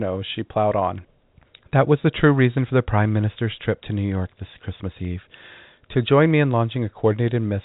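Nothing goes wrong anywhere in this speech; the top end stops at 4 kHz, which is simply the ordinary G.711 telephone coding carrying it as that format always does.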